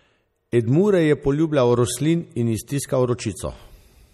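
Throughout, the audio has likely passed through MP3 compression at a bitrate that fits 48 kbps. Short of bits, the encoder discarded everything above 14.3 kHz and switched weak frequency lines on and off between frames. The result is a dulled top end and a plainly audible watery, swirling texture across the speech.

At 0.52 s, a sharp attack fell late in a transform block, so quantisation noise sized for the loud onset spread over the quiet 12 ms before it. This pre-echo is heard as a brief hiss just ahead of the attack, which itself sounds softened and smeared.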